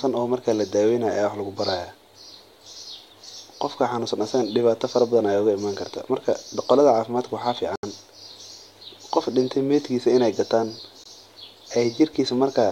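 A wireless link that likely lost packets to interference left the receiving buffer empty twice, producing a Bluetooth stall each time. At 7.76 s the speech drops to silence for about 75 ms, until 7.83 s, then resumes. At 11.04 s a much shorter dropout of roughly 18 ms cuts in. In both cases the sound simply halts and picks up again, as playback waited for resent data to arrive.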